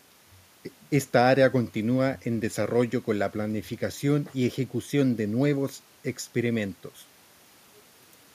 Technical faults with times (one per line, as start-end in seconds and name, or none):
none